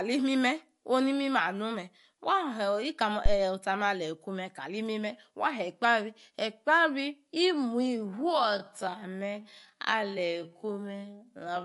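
MP3 compression runs through the whole recording, and the damage is plainly audible. The likely cause is a low-bitrate MP3 encode, and the sound fits a rate around 48 kbps. With too few bits, the encoder drops weak frequency lines that flicker on and off between frames, giving the speech a watery, swirling texture with metallic chirps on s sounds and smeared onsets. Nothing is present above 11.3 kHz, where the encoder cut the treble.

A time-stretched section runs from 7.95 s to the end of the clip. The pace drops abruptly to 0.54 times normal speed while the pitch holds steady, so the speech drags. Likely software lengthened this part to fill a set duration, preserving pitch by repeating short slices of the audio rather than playing it back slower.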